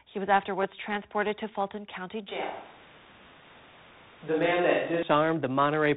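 From the first moment, the speech carries tandem speech coding: it went through two speech coders in a row, G.726 at 32 kbit/s, then G.711 mu-law at 64 kbit/s, then G.726 again at 40 kbit/s. Each stage re-encodes the last stage's already degraded output, so their errors stack up, and the result sounds rougher and noisier than a single pass would. Everything above 3.8 kHz is gone, which gives the whole clip that narrow telephone band.

At 2.28 s the sound abruptly turns roomy and hollow, with thinner bass, and it stays that way until 5.03 s, when it snaps back just as suddenly. That points to a switch to a distant microphone, most likely because the close mic's signal dropped out and a farther one filled in. During that stretch the level sits about 5 dB lower, and room noise comes up to roughly 25 dB below the speech.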